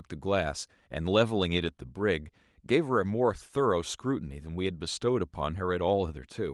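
No technical faults are audible in this speech recording.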